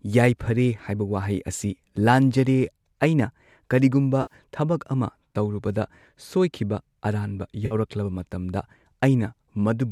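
At 4.22 to 4.34 s, and again at 7.66 to 7.75 s just after "ꯇꯧꯔꯨꯕꯗ ꯁꯣꯏꯈꯤꯕ ꯑꯔꯥꯟꯕ", the speech smears into a brief noisy, phasey patch. This is AAC frame loss with concealment: the decoder patches 80 ms, then 50 ms, of missing audio from the last good spectrum.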